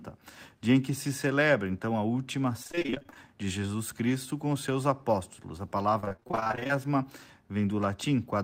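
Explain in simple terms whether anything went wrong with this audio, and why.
Right after "celebra então a última", from 2.63 to 3.29 s, and again from 6.00 to 6.76 s, the speech turns choppy and robotic. This is repeated packet loss: small chunks of audio kept going missing, and each gap was patched by stretching the sound just before it.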